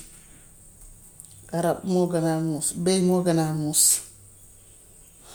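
No technical faults are audible.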